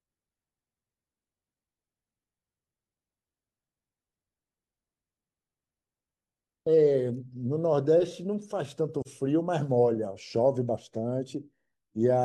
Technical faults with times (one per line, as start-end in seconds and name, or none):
9.02-9.07 AAC frame loss with muting